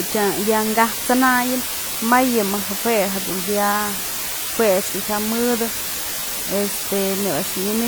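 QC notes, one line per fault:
Throughout, low bit depth with dither: a constant, even hiss sits under the speech at nearly the same level, only about 5 dB down, yet the speech carries no gritty distortion. The signal has been reduced to very few amplitude steps, consistent with a 4-bit word length, and dither was added before rounding, so the rounding error becomes steady white noise spread evenly across the spectrum instead of harsh, signal-dependent buzz.
Throughout, WMA compression: the speech sounds washy and ringing, with a hiss that swells and recedes with the sound and plainly audible coding damage. This points to a transform codec, likely WMA at a rate around 48 kbps, encoding in long blocks. The quantisation noise smears across tens of milliseconds around each sound, and weaker spectral detail is dropped, although content still extends up to about 20.1 kHz.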